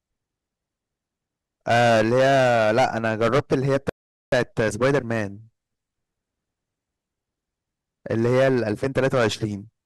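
From 1.68 to 5.23 s the speech shows hard clipping: the level is driven about 13 dB past what a stage can pass, so peaks are sliced flat. The result is a harsh fuzz on every loud syllable; the waveform shows squared-off tops, and the spectrogram shows energy smeared far up the spectrum. Inside that stretch, at 3.89 s, a rebuffering stall cuts the audio to silence for 430 ms because the player has run out of downloaded data. At 4.32 s it resumes exactly where it stopped, losing nothing but adding time. It appears as a flat gap in the waveform and a blank vertical band on the spectrogram. Hard clipping returns from 8.11 to 9.44 s, overdriven by about 10 dB, with the same flattened peaks and crackling high-frequency spray, slightly less severe than the first stretch.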